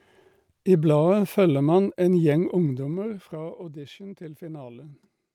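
From 2.32 to 3.72 s there's zipper noise: the speech drops by roughly 15 dB in 2 dB unsmoothed steps, about seven a second, each ticking audibly.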